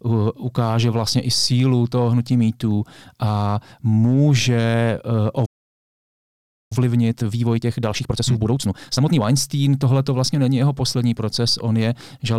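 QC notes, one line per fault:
5.45–6.72 s, playback stall. The speech stops mid-flow and the output goes silent for about 1.25 s. The player likely ran out of data or had its thread blocked. Sound returns only once it recovers, with a backlog built up.
6.72–9.22 s, time-compressed catch-up. The speech runs hurried at 1.5 times normal speed for 2.5 s, yet keeps its normal pitch. Small pieces are cut out and cross-faded to clear the backlog.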